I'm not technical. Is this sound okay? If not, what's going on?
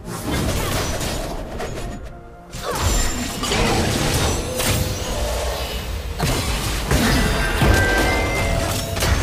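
Yes, nothing wrong is audible anywhere in the recording.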